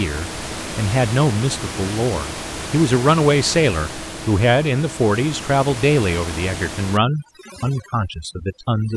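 From 6.97 s to the end of the clip, the speech is affected by overdone noise removal. The room noise sits about 11 dB below the speech, and a noise reduction stage clamps down on it far too hard. Bands that fall near its noise estimate are pulled down or shut off. Quiet parts of the speech go with them. The background drops and breaks up into twinkling specks.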